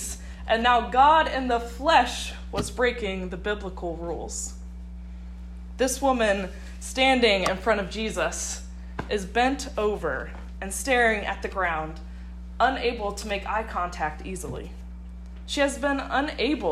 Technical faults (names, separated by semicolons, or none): mains hum